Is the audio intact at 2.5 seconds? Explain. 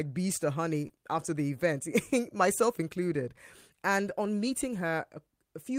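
Yes, at 2.5 seconds the speech is intact, with no dropout, click, distortion or other fault to be heard at that point.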